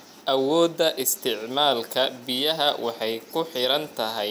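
No faults detected anywhere in the speech.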